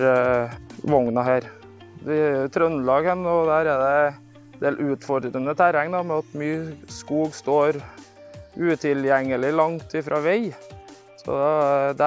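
Nothing in this one trips the ear, with no glitches, dropouts or odd artefacts turning up anywhere along the way.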